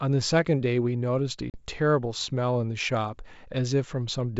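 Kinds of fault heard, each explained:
Packet loss on an ADPCM call: from 1.50 to 1.64 s the speech drops into a hard-edged 40 ms silence, pointing to about two lost packets, and the G.722 decoder's predictor and step size fall out of step, so the speech restarts unevenly before settling.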